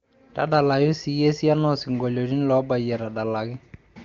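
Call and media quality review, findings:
No issues found: nothing stood out on listening to this speech clip, carried over the AMR wideband (HD Voice) path at 23.85 kbit/s.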